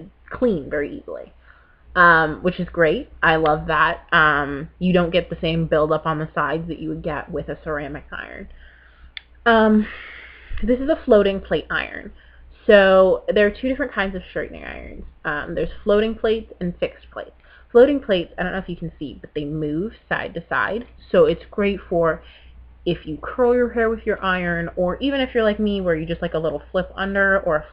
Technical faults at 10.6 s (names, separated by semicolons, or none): none